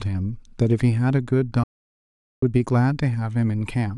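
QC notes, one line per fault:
1.63–2.43 s, playback stall: the speech halts mid-flow into clean silence for about 0.79 s, likely the player starving for data; far longer than a brief dropout click.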